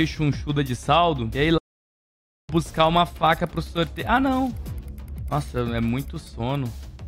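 A playback stall runs from 1.57 s to 2.50 s: the sound cuts off mid-flow and the output stays silent for about 0.9 s before it picks up again. The likely cause is the player running short of data or having its thread blocked.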